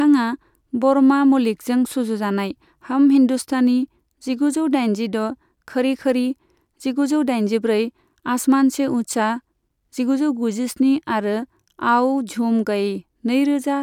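Nothing stood out as a technical problem on listening to this speech recording.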